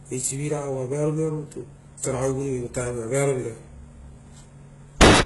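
Throughout the speech, the treble has a synthetic quality: sibilants come out gritty and lispy, and nothing is present above about 11.4 kHz. The heavy damage is likely HE-AAC compression at a very low rate, fitting roughly 12 kbps. Only the lower band is properly coded. The upper band is regenerated by copying lower content upward under a coarse envelope, so its harmonics fail to align with the real ones across the crossover.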